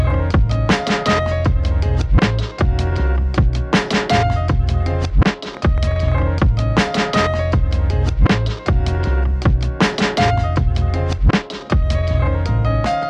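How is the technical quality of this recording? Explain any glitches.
The recording has one clear glitch: a train of clicks from 5.25 to 6.19 s. About fifteen sharp clicks arrive in under a second, at roughly 12.9 per second but with uneven spacing. Each click has much the same shape. They peak at about the level of the sound itself, so they stand out as a rapid, ragged ticking. The likely cause is an external pulse source, such as interference from nearby equipment or a faulty connection or power supply.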